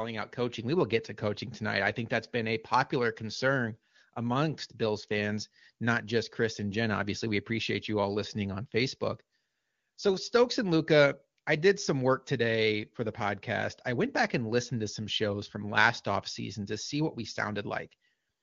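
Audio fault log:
No faults heard anywhere in this speech.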